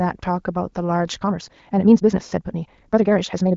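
From 1.19 s to the end of the clip, a time-stretched section runs at nearly twice the original pace, about 1.99 times faster, while the pitch stays where it was. The likely cause is software compressing this stretch of speech to fit a shorter length, keeping pitch by discarding short slices of the waveform. The result sounds rushed, with a sudden jump in tempo at 1.19 s. The AMR-WB wideband coding, with nothing above about 7 kHz, is audible only as light band-limiting.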